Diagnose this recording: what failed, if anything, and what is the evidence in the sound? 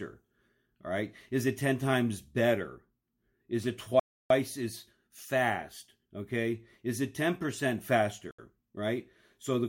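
The wireless link to the headphones most likely stalled, a Bluetooth stall in which delayed packets let the receiver's buffer run empty. Speech drops to clean silence from 4.00 to 4.30 s, a gap of 308 ms, then resumes with "as fast". A shorter 74 ms dropout follows at 8.31 to 8.39 s. Neither gap contains any noise or glitch, only silence while playback waits for the resent data.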